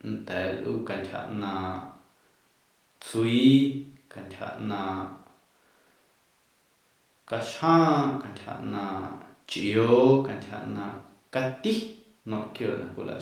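No technical faults can be heard anywhere in the speech. There is nothing here that needs a time mark or a fix.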